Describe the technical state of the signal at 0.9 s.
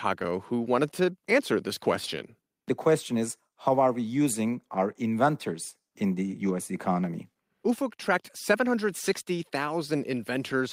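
At 0.9 s the speech signal is intact, with no dropout, distortion, glitch or other fault to be heard at that point.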